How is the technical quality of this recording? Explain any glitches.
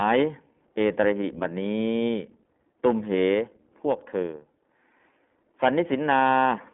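The recording has been passed through the iLBC codec for its whole length, so its quality is limited throughout.

iLBC codec, throughout: the speech was squeezed into a narrowband VoIP channel that codes the excitation of each short frame on its own, consistent with 20 ms frames and the 15.2 kbps mode. Nothing survives above about 3.7 kHz, and the useful band runs from roughly 200 Hz to 3.5 kHz, so the speech sounds muffled and telephone-like, with a plainly audible rough, synthetic grain.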